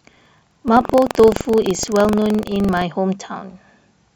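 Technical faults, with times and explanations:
0.00–2.82 s, buffer tearing: the speech carries a rattling buzz at 23.4 Hz, which fits a 2048-sample buffer. Writer and reader cross every period, splicing in a small sliver of audio from about 150 ms earlier. The waveform shows regular hard jumps, and the spectrogram shows evenly spaced vertical streaks.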